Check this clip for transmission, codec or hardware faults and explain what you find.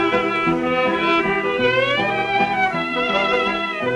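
No faults turn up anywhere in this clip.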